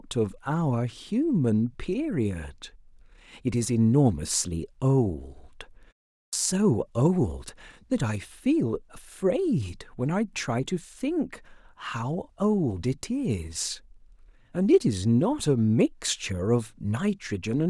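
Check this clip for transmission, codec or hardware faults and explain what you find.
One fault is audible, a clipped start after a pause. At 6.26 s, following a 0.42 s gap, the output path wakes late and swallows about 68 ms, so the sound begins abruptly without its onset.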